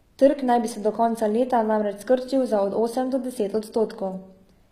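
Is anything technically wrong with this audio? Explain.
Yes. Throughout the speech, the s sounds come across gritty and lispy, the treble sounds synthetic, and nothing is heard above about 14.9 kHz. The likely cause is HE-AAC compression at a rate that fits roughly 20 kbps: only the lower band is coded, and the treble is rebuilt by copying lower bands upward, so the harmonics do not align.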